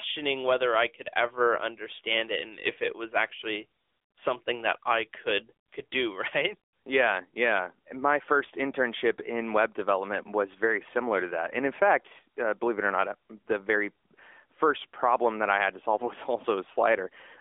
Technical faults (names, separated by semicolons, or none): AMR narrowband mobile codec